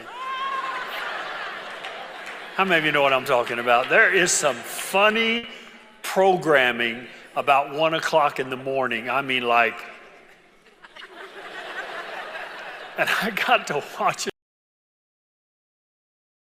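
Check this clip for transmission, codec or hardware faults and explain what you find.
Two faults turn up here, one brief and one that runs out the clip.

At 5.37 to 5.45 s there's a burst of packet loss. The receiver covered about 60 ms by stretching the last bit of sound and fading it into a brief buzz or hiss. Then playback jumps ahead, so roughly 60 ms of material is simply skipped.

From 14.30 s to the end there's an audio dropout to silence. The sound stops mid-flow and what follows is silence, with no room tone at all. That's likely the input itself going away, through a disconnected device, a failed link or an accidental mute.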